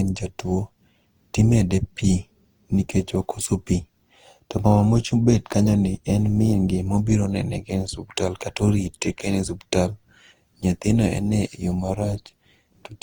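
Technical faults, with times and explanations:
Throughout, generation loss: the speech sounds swirly, hollow and smeared, with blurred attacks, although the band still reaches about 20.2 kHz. A single 48 kbit/s Opus pass would not explain this. The likely cause is around five successive re-encodes, each adding fresh quantisation noise.
11.90 to 13.02 s, overlap-add ripple: right after "ene yo" the level pulses regularly, about 11 dB deep, at roughly 200 Hz, giving a metallic buzz with extra tones around each note. Unlike the irregular codec swirl, this is a steady buzz at the frame rate, from overlapping frames that do not sum to constant gain.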